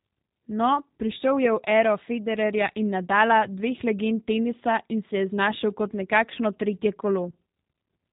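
From start to finish the speech carries G.729 codec damage, plainly audible: nothing above 3.8 kHz, and a rough, synthetic, pulse-built texture that fits an 8 kbit/s G.729A stream.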